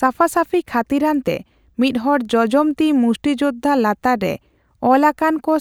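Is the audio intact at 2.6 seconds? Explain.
Yes, the speech is intact at 2.6 seconds, with no dropout, click, distortion or other fault at that point.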